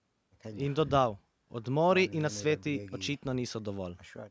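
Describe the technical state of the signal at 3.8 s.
At 3.8 s the speech signal is intact, with only the expected band-limiting of call microphone processing, which leaves nothing above 8 kHz and trims the lowest bass.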